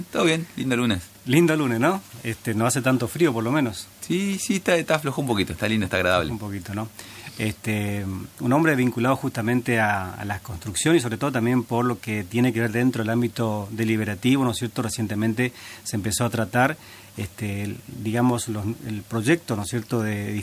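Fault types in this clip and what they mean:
No technical faults can be heard anywhere in the audio. There is nothing to list for this clip.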